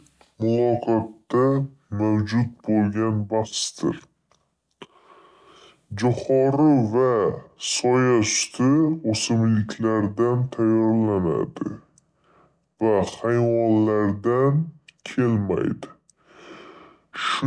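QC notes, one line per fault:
Throughout: wrong sample rate. The speech runs at about 0.69 times its proper speed and sits roughly 6.5 semitones low, so it sounds slow, heavy and drowsy. Speed and pitch have dropped together by one ratio, which fits audio recorded at 32 kHz being played at 22 kHz with no conversion. On a spectrogram, harmonics and formants sit lower and closer together and syllables stretch wider in time. The waveform shows elongated cycles and lengthened pauses.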